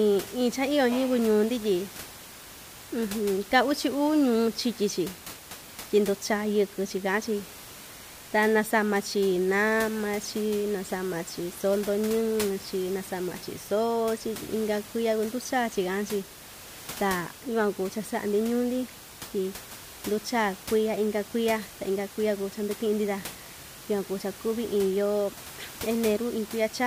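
There are no technical faults in this speech recording; the only background sound is the room's own noise, sitting about 16 dB below the speech.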